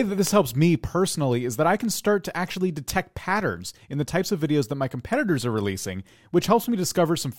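From 0.27 s to 7.1 s, word clock ticks recur about every half second, some fifteen sharp clicks. The unlocked receiver's clock drifts by roughly 40 ppm, slipping one sample each time. Spectrograms show thin full-band vertical lines, waveforms a one-sample step.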